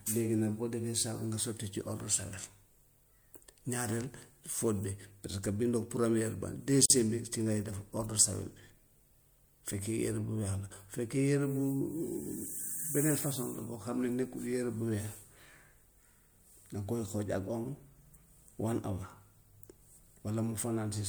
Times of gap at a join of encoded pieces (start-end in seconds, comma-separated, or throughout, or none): 6.86-6.90